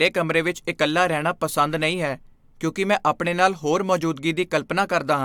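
Speech recording with no audible technical faults.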